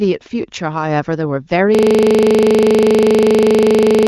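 From 1.75 s to the end, a system hang loop: a frozen system replays one 40 ms buffer exactly, giving a steady 25 Hz buzz rather than irregular stutter.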